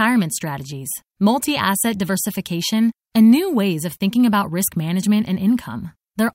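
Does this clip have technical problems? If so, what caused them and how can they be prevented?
No, nothing in this speech clip points to a technical problem, so there's no cause to track down or anything to prevent here.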